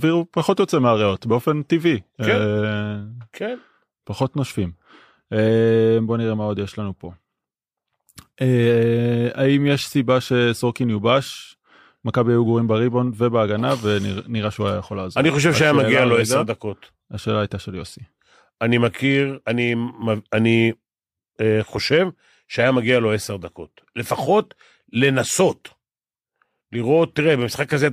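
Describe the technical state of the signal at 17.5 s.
At 17.5 s the speech signal is intact, with no audible fault at that moment.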